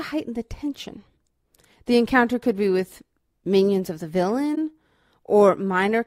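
Right after "with minions of the", at about 4.55 to 4.58 s, the speech drops into a short gap. That's AAC frame loss with muting. A chunk of the coded stream didn't arrive, and the decoder zeroed that part of the spectrum instead of guessing. The missing stretch is about 21 ms, which fits a single lost AAC frame. The overlapping transform windows fade the sound down and back up around it, so you hear a brief dip.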